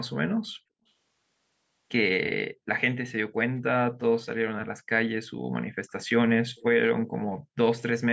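A faint, delayed copy of the speech surfaces in short scraps at 3.56 to 3.6 s and 4.2 to 4.26 s, trailing by 245 ms and sitting around 40 dB below the speech. It returns somewhat stronger, around 30 dB down, at 6.56 to 6.63 s and 7.32 to 7.37 s, now trailing by 293 ms. This is echo leak, likely from one end of the call playing through a loudspeaker whose echo canceller let part of the microphone pickup slip back. At 3.66 to 3.7 s the room sound briefly vanishes for about 40 ms, falling by as much as about 40 dB before returning. This is background gated by the echo canceller, which clamped the microphone down hard while the loudspeaker was playing, then released it.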